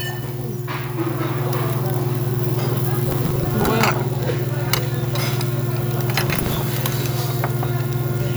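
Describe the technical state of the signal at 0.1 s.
At 0.1 s the signal is intact, with no audible fault at that point in the sound.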